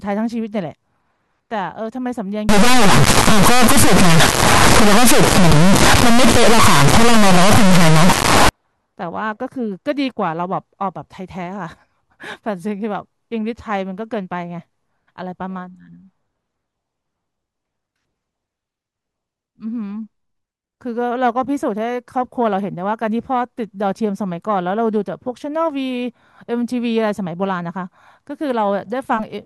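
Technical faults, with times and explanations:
2.49–8.49 s, stuck bit: a high-order data bit, likely jammed by a broken line or converter, offsets roughly half the samples by a big fixed step. The speech turns harshly buzzy, and its pauses fill with loud, grating noise.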